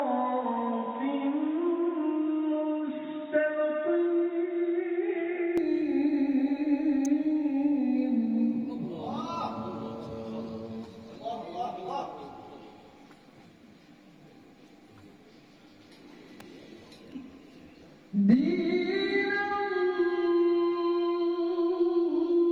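Right from the start, up to about 5.58 s, the sound is boxy and dull, with nothing above 3.8 kHz and a fresh layer of background noise sitting roughly 30 dB under the signal. The most likely cause is the input switched to a poorer device, a narrower-band mic or headset path, before the better one takes over. The handover is seamless, with no gap and no real jump in level; the tone just opens up.

Later there's an electrical switching spike, a sharp snap at 7.05 s and another at 16.40 s. Each is a brief crack laid over the audio, likely the kind you'd get when a nearby switch, motor or static discharge arcs and the cable picks it up. Both are over in a few milliseconds, so they read as isolated clicks rather than anything sustained.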